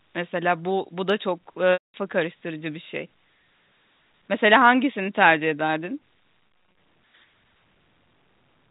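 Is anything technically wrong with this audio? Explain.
Yes. There is packet loss with pitch repetition at two points. From 1.73 to 1.94 s about 210 ms of audio is gone. The receiver loops the last pitch period, so a buzzy held tone fades out into silence before the speech cross-fades back in. From 6.41 to 6.77 s, 160 ms is lost in short gaps scattered over 360 ms, none longer than 30 ms, giving a run of brief, buzzy snags. The repeated pitch cycle, rather than plain silence or a replayed chunk, marks it as concealment. The 4 kHz telephone bandwidth is simply the G.711 coding.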